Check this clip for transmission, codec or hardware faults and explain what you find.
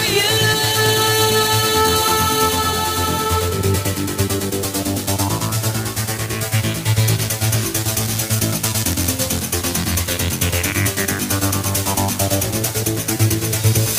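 One hardware fault is present. Periodic clock jitter runs throughout: interference near 4 kHz shakes the converter clock, adding sidebands around each component, heard as a metallic edge that disappears in silence.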